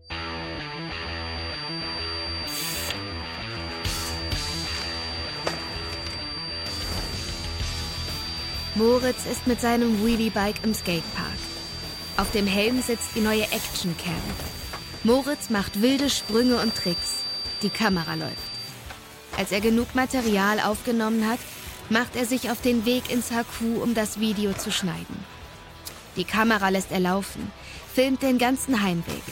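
The loudspeaker-to-microphone loop was likely sitting right on the edge of feedback, with gain just high enough that a single frequency near 4.7 kHz keeps recirculating without building into a howl. From the start to about 18.8 s this produces a feedback whistle: a thin, steady high tone roughly 10 dB under the main sound, riding behind it throughout and swelling and fading slowly in level before it stops.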